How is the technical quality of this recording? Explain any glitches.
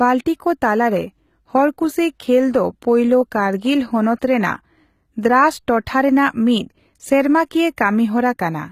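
The recording has one fault, audible throughout: the treble sounds synthetic rather than natural. The likely cause is HE-AAC compression at a low bitrate, consistent with roughly 20 kbps. Only the lower spectrum is coded, and the highs are rebuilt by copying lower bands upward, so harmonics misalign. S sounds turn gritty and metallic. A spectrogram would show smeared, repeated-looking high-frequency texture with nothing above 14.9 kHz.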